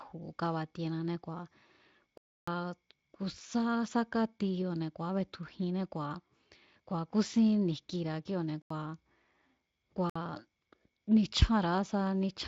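Blocks of digital silence at 2.18–2.48 s, 8.62–8.70 s and 10.10–10.16 s cut this speech abruptly to silence, as unfilled output buffers would; the 85 ms gap fits a 4096-sample buffer.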